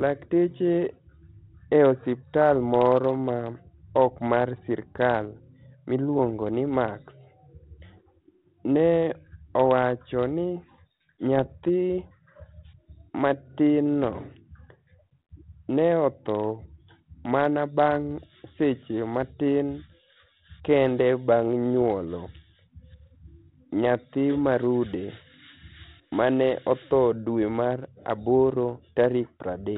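Bit errors on an ADPCM link hit the speech from 11.38 to 11.69 s. Flipped bits throw the G.726 decoder's step size and predictor off, so pops and rough, level-jumping bursts ring on briefly.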